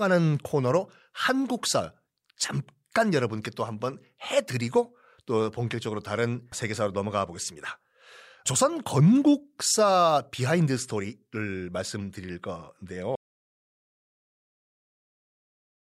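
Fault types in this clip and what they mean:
Audio dropout to silence: the input feeding the recorder was most likely lost, through a disconnected device, a broken link or an accidental mute, while recording carried on and wrote silence. In this speech clip the sound stops abruptly at about 13.15 s and never returns, leaving roughly 2.7 s of silence through to the end, with no room tone or background noise underneath. Whatever was spoken in that stretch is gone.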